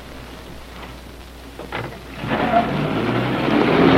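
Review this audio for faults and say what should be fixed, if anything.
Nothing should be fixed, as the audio has no faults.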